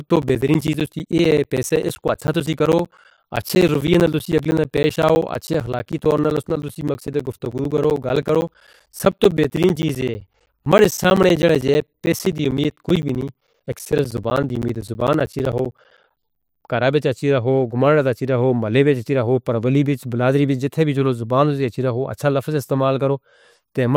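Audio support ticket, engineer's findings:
Periodic USB or driver dropouts, 0.09–16.68 s: ticks every 64 ms, each a roughly 10 ms silent gap. Background task stalls USB bus or driver; samples lost.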